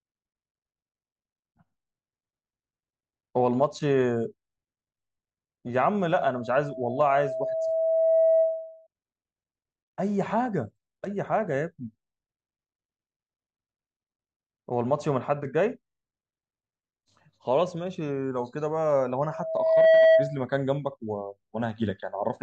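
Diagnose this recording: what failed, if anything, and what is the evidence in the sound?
Loudspeaker feedback squeal in the analogue acoustic loop, where gain exceeds one: a 647 Hz tone swells at 6.09–8.87 s and 19.23–20.40 s, drawing a brightening horizontal spectrogram line.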